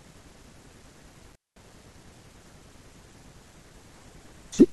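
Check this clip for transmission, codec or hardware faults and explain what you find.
One hardware fault is present. From 1.32 to 1.59 s the speech drops out for about 209 ms, with crackle at each edge and faint hiss in the gap. This is an intermittent contact: a loose cable or plug briefly opened the signal path.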